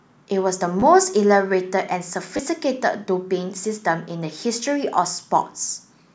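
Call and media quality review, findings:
Repeated buffer at 0.80–0.82 s: brief buzzy stutter in the speech, hard joins at each repeat. The same short slice plays twice more, which fits a 10 ms buffer. Audio output path starved and replayed its last buffer. Roughly 20 ms of speech lost.

Repeated buffer at 2.37–2.39 s: same signature, a short buzz with abrupt joins, two extra plays of a slice consistent with a 10 ms buffer. Same playback underrun, dropping about 20 ms of audio.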